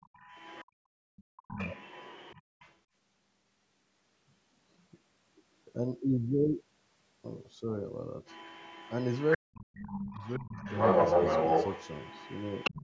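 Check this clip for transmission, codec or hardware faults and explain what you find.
The faults here all come from the echo canceller on a speakerphone call. The far end leaks through, the room background gets gated, and the talker's speech is cut during double talk.

Other side's voice leaking through: from 0.01 to 0.65 s, 1.16 to 2.77 s and 8.26 to 12.86 s. A second voice sits alongside the talker. Early on it is faint, roughly 20 dB down. In the last stretch it is about 5 dB louder than the talker. The likely cause is loudspeaker sound that the canceller failed to remove.

Background gated by the echo canceller: at 0.65 to 1.12 s and 2.42 to 2.59 s. The room sound drops out, by about 39 dB and then about 32 dB. It lasts about half a second, then a brief moment. The canceller clamps the microphone while playback runs, then releases it.

Speech suppressed in double talk: at 1.4 to 1.7 s and 9.37 to 10.62 s. 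The talker's own speech sinks by around 40 dB and breaks up. The first dip is short. The second lasts about a second. Both sides talk at once here. The canceller likely cannot tell the talker from the echo, so it ducks both. The band limit, with nothing above 8 kHz, is ordinary call processing.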